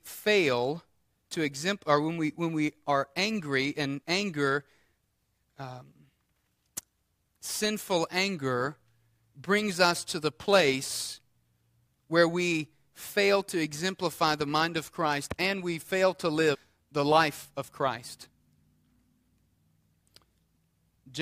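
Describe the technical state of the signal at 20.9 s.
At 20.9 s the speech signal is intact, with no audible technical fault at that moment.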